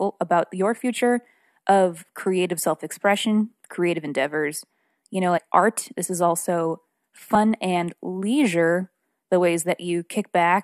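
At 5.37 to 5.39 s and again at 7.34 s, compressed frames are skipped. The speech jumps ahead by about 50 ms each time, which fits roughly two 23.2 ms frames going missing.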